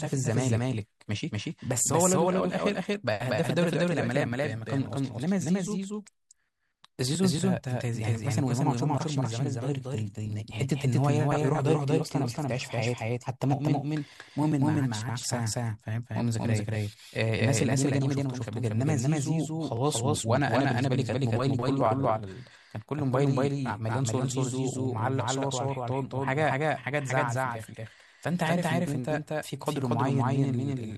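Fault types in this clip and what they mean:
Doubled audio track: every syllable is followed by a second, equally loud copy about a fifth of a second later, for the whole clip, giving a stuttering slapback. The copy is full-band and dry, with no decay or room colour, so it is not a natural echo. The likely cause is the same signal being captured twice, once through a slower path.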